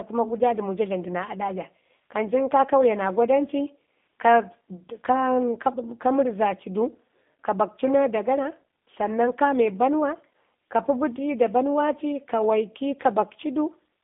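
From start to finish the speech carries G.729 codec damage, plainly audible: rough, slightly synthetic texture from rebuilding each frame out of a filter, pitch predictor and sparse pulses, fitting an 8 kbit/s stream. On a spectrogram the line band sits between 200 Hz and 3.6 kHz, with nothing above 3.7 kHz.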